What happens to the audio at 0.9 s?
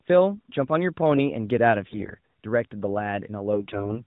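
At 0.9 s the speech runs on intact, with nothing beyond the band-limited sound of the AMR narrowband mobile codec it is carried through.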